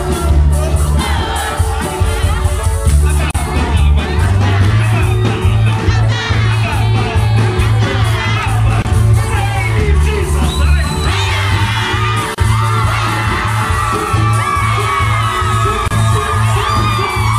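At 3.31 s the sound drops out for about 36 ms, then picks up exactly where it left off. The same gap at a join of encoded pieces comes back at 8.82 s (27 ms), 12.35 s (33 ms) and 15.88 s (29 ms). Each piece went through the encoder on its own and got stitched back untrimmed, so the start-up delay and last-frame padding are left in as short silences with smeared edges.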